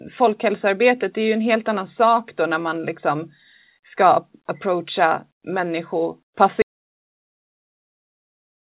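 At 6.62 s the speech stops mid-flow and the clip stays in digital silence for its last 2.1 seconds. This is an audio dropout to silence, most likely from the input being lost while the recorder kept writing silence. Unlike a noise gate or a fade, there is no tail and no room tone. Unlike a packet-loss gap in the call path, there is no concealment buzz. Before the cut, the G.711 mu-law call audio has nothing above 4 kHz.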